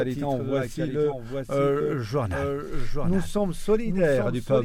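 Throughout the audio a second, full-band copy trails the original by roughly 0.7 s at about 5 dB lower, a doubled audio track, likely from a slower capture path recording it again. Unlike an echo or reverb, the copy has no decay and no room colour. From 1.0 s to 4.09 s there is a digital radio blend to analogue FM. A cross-fade of about 0.25 s brings in a faint hiss well below the signal, with no change in level. Because the hiss arrives through a fade, this is a switch to the analogue broadcast rather than a simple filter.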